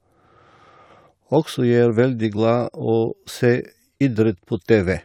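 No technical faults are audible.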